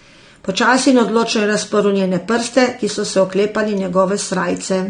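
From start to finish the speech sounds dull and smeared, with a warbling, fizzy texture on sustained sounds and sibilants and an upper band that seems cut away. This is likely AAC compression at a low bitrate, about 32 kbps, where coarse quantisation leaves spectral holes.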